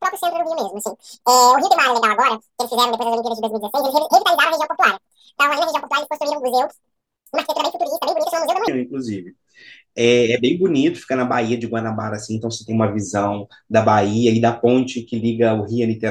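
From 0.00 s to 8.68 s, the speech plays at twice its proper speed. This is audio read two samples at a time (double speed). The reader treated each pair of samples as a single frame, as if the stream held two channels or samples twice as wide. Half the expected frames pass for the same time. Everything runs at 2x speed and sits 12 semitones, a full octave, too high.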